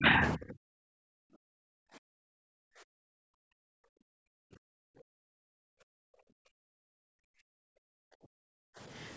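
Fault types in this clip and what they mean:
Speech suppressed in double talk: Right at the start, through roughly the first 0.8 s, the speech sinks deep, something like 40 dB at its lowest, and breaks up for most of that stretch. The likely cause is that both ends were talking at once and the echo canceller, unable to separate the local talker from the loudspeaker echo, clamped down on everything, so the opening speech gets chopped and buried.
Background gated by the echo canceller: From about 1.08 s to 8.79 s the room tone keeps ducking, by as much as about 40 dB, for around seven seconds in total. That's the echo canceller pulling the microphone down hard whenever the loudspeaker had something playing, then easing off again. You hear the background come and go in steps instead of sitting steady underneath.
Other side's voice leaking through: Near the very end, around 8.97 s to 9.09 s, a faint scrap of a second voice slips in, way down at roughly 35 dB below the main speech. 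It's brief. Most likely the far side was playing on the device's loudspeaker and the echo canceller didn't quite scrub all of it from the microphone, so a small residue made it through.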